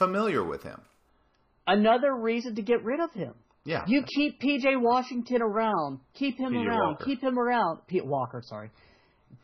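Speech, with an adaptive stream switching to a lower bitrate at 1.09 s and staying there to the end. Quality drops abruptly with no gap: nothing above 6 kHz survives, and coding artefacts thicken, which fits a step down from a 128 kbit/s to a 16 kbit/s MP3 rendition.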